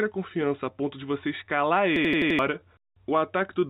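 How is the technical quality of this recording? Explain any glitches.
The recording has three timing problems layered on each other, heard through a narrowband call path where G.711 A-law leaves nothing above 4 kHz.

Clock drift between sender and receiver runs through the whole speech clip. The sender's clock is running roughly 4 percent slow, so the receiver's jitter buffer keeps draining and has to be topped up. The result is a faintly unsteady pace rather than one obvious glitch.

Repeated timing corrections cover nearly everything from 0.05 to 3.62 s. The receiver stretches playback to about 95% speed, padding in something like 150 ms overall to keep up with the slow sender. The edits are small, heard if at all as slight hiccups or a wobbly tempo.

A system hang loop hits from 1.96 to 2.39 s. The system froze while the audio hardware kept replaying its ring buffer, so one 85 ms chunk, which fits a 4096-sample buffer, repeats five times at 11.7 Hz. 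It sounds like a stuttering rattle, and about 400 ms of real audio is lost.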